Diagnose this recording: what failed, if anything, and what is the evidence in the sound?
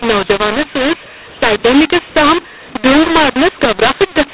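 The failure is at the codec stage: a mu-law and A-law mix-up. The telephone audio was coded as A-law, at 8 kHz, and then decoded as if it were mu-law. For the whole clip the speech sounds harsh and gritty. The two laws map the 8-bit codes to levels differently, so the levels come back scrambled. Some samples swell, others shrink, and the quietest ones get pushed well above silence, which is why the gaps between phrases fill with noise.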